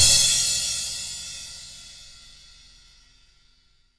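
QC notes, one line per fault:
Nothing to flag here, no audible faults anywhere in the clip.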